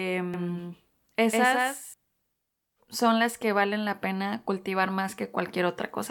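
From 0.34 s to 1.94 s the speech carries a doubled audio track: a second full-band copy trails the original by roughly 150 ms, sitting about 5 dB lower. The likely cause is the signal being captured twice, once through a slower path. Unlike a room echo or reverb, the copy has no decay tail, no room colouring and no further repeats, and it switches on and off abruptly at those two points.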